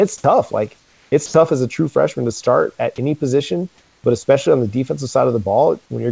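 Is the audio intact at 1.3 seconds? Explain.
No. From 1.26 to 1.34 s the sound gives way to comfort noise for 80 ms, likely sound dropped by the voice detector treating the sound as background.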